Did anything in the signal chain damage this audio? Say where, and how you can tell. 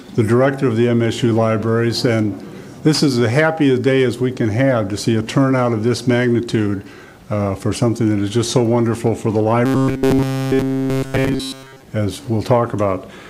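Yes: robotic sound from repeated short buffers, 9.66 to 11.82 s. The rigid 133 Hz buzz points to a likely starved driver buffer looping roughly 7.5 ms segments throughout.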